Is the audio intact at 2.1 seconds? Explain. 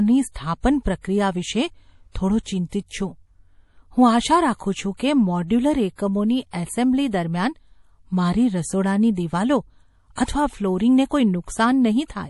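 No. From 2.12 to 2.15 s there is pre-echo. A transform codec spread quantisation noise across a whole block containing a sharp attack, so noise meant for the loud onset also fills the quiet 37 ms before it. The result is a brief hiss ahead of the attack, which sounds soft and smeared.

This moment also carries the damage that runs through the whole clip, likely from MP3 compression at a low bitrate, consistent with about 48 kbps. The encoder cuts everything above 11.5 kHz and lets weak frequency lines flicker on and off, so the speech sounds watery and swirly.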